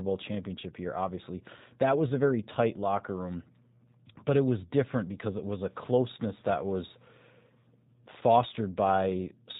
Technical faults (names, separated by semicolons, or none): G.729 codec; VoIP packet loss concealed by the speech codec